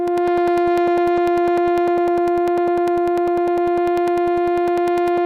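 From 0.08 to 5.18 s, periodic USB or driver dropouts blank about 2 ms of music every 0.1 s, producing evenly spaced ticks, unlike randomly timed clicks.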